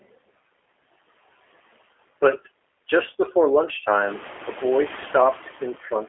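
From the start, the speech carries G.729 codec damage that is plainly audible: a slightly rough, synthetic edge, consistent with an 8 kbit/s codec rebuilding the voice from a vocal tract model and a few pulses per frame. A spectrogram shows energy confined to a telephone band of roughly 300 Hz to 3.4 kHz, with nothing above it.

Also throughout, noise suppressor artifacts come and go with the speech. Between phrases the background is pulled down by about 14 dB, then rises back underneath each phrase. On a spectrogram the noise floor appears as a patchy, blinking layer rather than a smooth band, darkening in the pauses. This pumping stands out more after about 4 s, when the room noise rises by about 15 dB, though it still sits about 17 dB below the speech.

At 2.09 s, VoIP packet loss concealed by the speech codec causes a short glitch. About 20 ms of audio went missing, and the decoder filled the gap by extending the last pitch and spectral shape at falling gain, producing a brief, smeared blip. 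A spectrogram shows harmonics held flat across the gap. The waveform shows a small fading stretch, with the following speech weakened as the decoder recovers.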